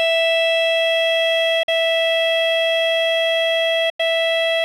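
Bluetooth dropout at 1.63 to 1.69 s and again at 3.90 to 4.00 s in this music. The output goes silent for about 46 ms, then 93 ms, and resumes as if it had played on. This likely happened because late wireless packets were discarded, consistent with two and then four packets lost.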